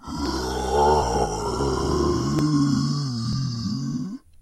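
A recording of everyday sound with four abrupt jumps at 0.26, 1.02, 2.39 and 3.33 s. Each is a jump where the sound skips ahead with no gap, losing roughly a tenth of a second, and about 150 ms at 1.02 s. The likely cause is a dropped buffer (overrun): audio was overwritten before being read.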